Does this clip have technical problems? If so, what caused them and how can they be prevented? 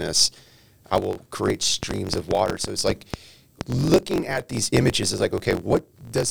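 Yes. A block size mismatch (truncated) runs through the whole clip. A steady buzz near 45.9 Hz sits under the speech. The speech also runs 1.07 times fast, at about normal pitch. One stage writes blocks that fit 1024 samples, and the next stage reads fewer. The tail of each block is lost. Matching the block sizes between the two stages prevents it.

A train of clicks runs from 1.83 to 3.62 s. About ten similar pops arrive at an uneven pace, roughly four per second. They peak about 15 dB above the speech. The likely cause is interference from nearby equipment or a faulty connection or power supply. Shielded cables, distance from noisy gear and a stable interface prevent it.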